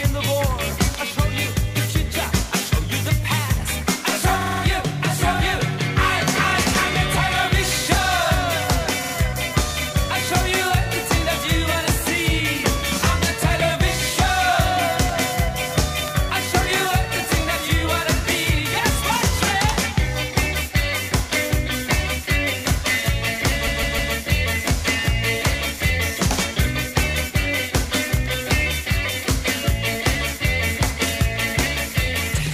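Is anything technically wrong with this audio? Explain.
Yes, there are repeated frames in three spots. At 4.40–4.61 s a 52 ms chunk replays four extra times. At 9.03–9.13 s the same size chunk replays twice more. At 23.66–24.13 s a 157 ms chunk loops three extra times. Compressed frames were duplicated, so the decoder plays them again. You hear a stutter, and the audio runs about 0.78 s longer overall.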